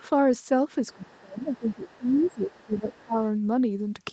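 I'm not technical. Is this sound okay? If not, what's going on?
No. Other side's voice leaking through, from 0.91 to 1.21 s and again from 1.39 to 2.98 s: a faint second voice is heard, likely the other caller's loudspeaker echo that the phone failed to remove.

Speech suppressed in double talk, from 0.93 to 3.19 s: the main voice drops sharply in volume in places, likely because both sides talked at once and the echo removal turned everything down.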